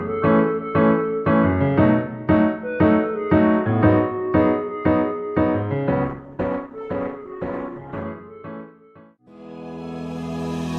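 The audio steps down abruptly at 6.05 s and recovers at 8.05 s. This is an adaptive stream at a lower bitrate. Codec artefacts rise. There is no gap. The drop fits Opus falling from about 64 to 12 kbit/s.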